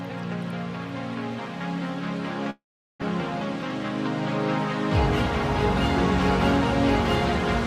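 From 2.50 to 3.04 s the sound smears into a fading buzz, goes silent for 0.4 s, then resumes with 0.4 s lost and timing shifted by about a tenth of a second. Likely a long network dropout: unlike a brief glitch, the concealment runs out into silence.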